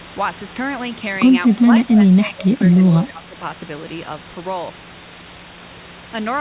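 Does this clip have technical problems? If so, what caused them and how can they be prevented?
Yes. Between 1.53 and 3.4 s the speech repeatedly dips and drops out, about 1.5 s in total, with the deepest cuts reaching roughly 25 dB. This is likely speech suppressed in double talk: while the far side was also talking, the echo canceller could not tell the local talker from its loudspeaker echo and attenuated everything. On a waveform the envelope shows sudden notches; a spectrogram shows the harmonics fading or vanishing in blocks. Better double-talk detection, or a headset, prevents it.

From 2.27 to 2.32 s a brief, faint copy of earlier speech returns about 248 ms late, at roughly 25 dB below the talker. This is likely an echo leak: one side played the call on a loudspeaker and its canceller let a scrap of the pickup slip back. A spectrogram shows a weak repeat of the preceding harmonic pattern, barely visible above the room noise floor; the waveform shows only a tiny ripple. 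Using headphones or a better-tuned echo canceller at that end prevents it.

The spectrum stops at 4 kHz, which fits the G.711 narrowband call path, and faint room noise sits about 29 dB below the speech.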